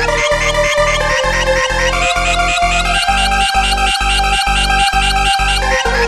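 Nothing in the recording stood out as a technical problem on listening.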